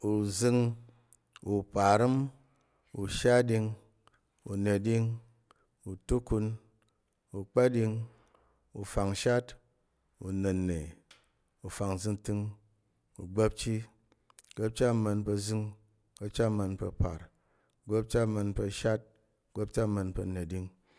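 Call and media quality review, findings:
No faults found in recording.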